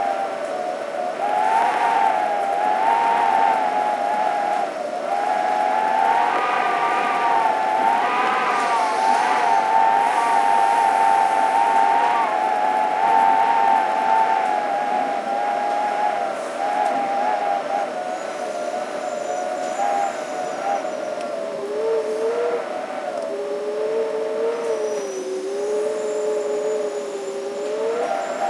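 From 0.0 to 14.24 s, the resampler restarted on every block of 10 ms, leaving edge errors heard as a 100 Hz buzz while signal plays.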